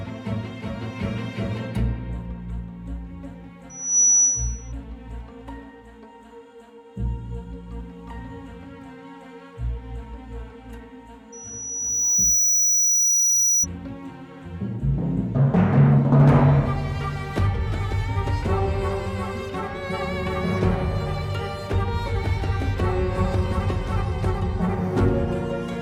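Loudspeaker feedback squeal appears twice at 5.9 kHz, where the microphone-to-speaker loop gain exceeds unity. From 3.70 to 4.72 s it swells within a fraction of a second to about 10 dB above the audio; from 11.32 to 13.66 s it builds more slowly, over about a second, to around 5 dB.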